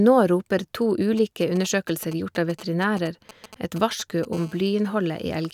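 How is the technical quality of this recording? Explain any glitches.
The recording carries radio-frequency interference from a nearby 2G handset, in two distinct phases.

GSM signalling bursts, 1.17 to 4.25 s: a phone close by is exchanging short control transmissions, and the audio circuitry rectifies each radio pulse. The result is a galloping dit-dit-dit of brief 217 Hz buzzes, sitting roughly 20 dB under the speech.

GSM phone buzz, 4.33 to 5.49 s: the handset has moved into a call and now transmits continuously at 217 bursts per second. Rectification turns this into a steady, hard, raspy 217 Hz buzz rich in harmonics, unrelated to the speech and about 29 dB below it.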